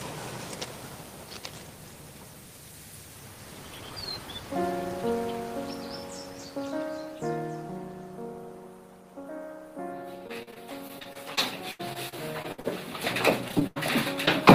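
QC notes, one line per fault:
10.27–12.66 s and 13.48–13.78 s, repeated packet loss (robotic sound): the audio turns choppy, with pieces missing. Audio packets kept failing to arrive in time, and each hole was patched by extending the last sound before the next hole came. The first stretch has 15 gaps totalling about 440 ms, the longest 79 ms, so about 18% of it is patched. The second has 5 gaps totalling 140 ms, the longest 90 ms, so nearly half of it is patched.
14.26–14.29 s, short concealed packet loss: a brief smear or wobble. About 20 ms of audio never reached the decoder. The gap was filled by continuing the preceding sound, from its pitch where it was tonal and with shaped noise where it wasn't, before blending back into the real signal.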